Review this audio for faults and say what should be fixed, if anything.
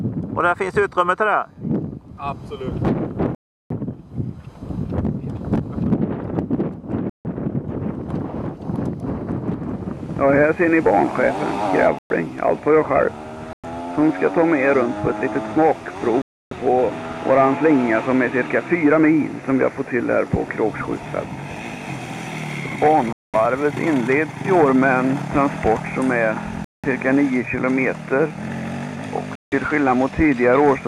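Packets held up by interference likely drained the headphones' buffer, so playback paused until resent packets arrived. These Bluetooth stalls cut the sound to silence for 0.11 to 0.36 s at 3.35, 7.10, 11.99, 13.53, 16.22, 23.13, 26.64 and 29.35 s. Keeping the phone close to the headphones and away from other 2.4 GHz devices would prevent them.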